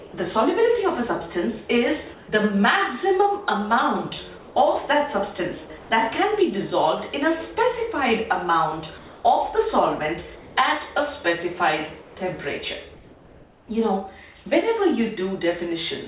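At 0.0 to 0.14 s, 2.14 to 2.28 s, 4.38 to 4.56 s, 5.78 to 5.9 s, 8.98 to 9.24 s, 10.36 to 10.56 s, 12.02 to 12.16 s and 12.94 to 13.68 s, the quiet background, about 22 to 30 dB below the loud passages, turns into a flat, textureless hiss about 1 to 3 dB quieter. This is likely comfort noise in place of the background. The sender paused transmission in the gaps, and the receiver filled them with synthetic noise. Across the clip, nothing is heard above 4 kHz, which fits a G.711 telephone codec.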